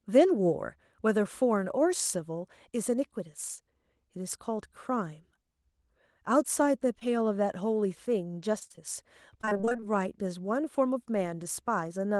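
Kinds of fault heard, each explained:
Short concealed packet loss: About 20 ms of the call's audio failed to reach the decoder in time near 7.0 s. The receiver extended the preceding speech for roughly 15 ms to cover the hole and then blended back, leaving a brief smear or wobble.
Repeated packet loss (robotic sound): Audio went missing over and over from 8.59 to 8.79 s and from 9.41 to 9.92 s, with gaps of up to 30 ms. About half of each stretch is patched-over continuation, so the speech turns choppy and broken, with pieces missing.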